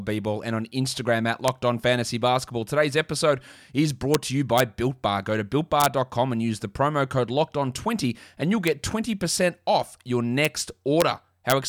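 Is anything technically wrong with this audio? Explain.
Yes. This speech has integer overflow at 1.48, 4.14, 4.58 to 4.60, 5.80 to 5.86, 8.68, 10.45, 11.01 and 11.50 to 11.52 s. On loud peaks, a sum or gain exceeded the largest integer and wrapped to the opposite sign instead of being limited, so the waveform jumps across the full range. Each event is a violent crack, much sharper than clipping, which flattens peaks into a buzzy, compressed distortion rather than snapping them to the other extreme.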